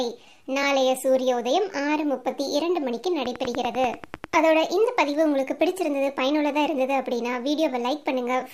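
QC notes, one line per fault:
3.26–4.35 s, train of clicks: a steady ticking of about ten sharp, alike pops, evenly spaced at 10.2 per second and peaking roughly 10 dB above the sound. The likely cause is a repeating pulse from nearby interference or a faulty connection or power supply.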